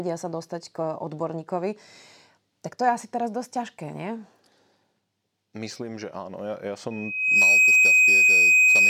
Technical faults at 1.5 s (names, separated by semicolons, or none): none